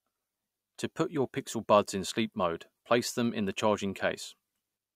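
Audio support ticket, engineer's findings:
No fault found in the speech recording. Nothing to trace to any component in the chain.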